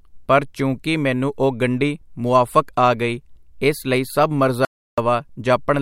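At 4.65 s, right after "ਗਈ ਇਸ ਲਈ ਸਭ", the speech cuts to dead silence with no room tone until 4.98 s: an audio dropout to silence, likely from the input link failing.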